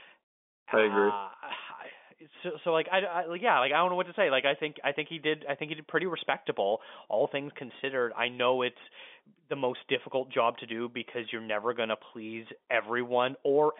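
Listening to this speech recording, nothing stood out as a technical problem, with the sound carrying the narrow band of an ordinary telephone line.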